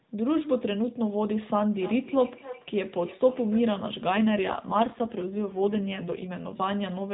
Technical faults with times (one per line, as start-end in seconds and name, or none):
1.74-3.73 feedback echo between two devices
4.12-6.28 AMR rate drop